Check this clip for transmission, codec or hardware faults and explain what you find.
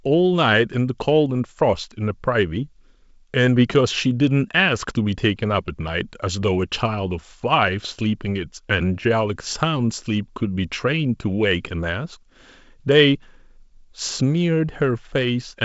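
No faults found in this clip.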